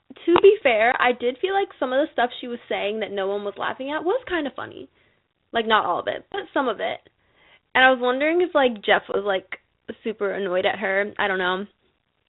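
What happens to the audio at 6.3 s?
At 6.32 s there is packet loss on an ADPCM call, lasting until about 6.39 s. A hole of about 20 ms, roughly one packet, drops to silence with hard edges. Because G.726 at 32 kbit/s sends only differences from an adaptive prediction, the receiver's predictor and step size lose track of the sender's. When the sound resumes it comes back slightly distorted, then settles within a few tens of milliseconds. That disturbed recovery after the gap is what separates it from a plain dropout, which would resume cleanly.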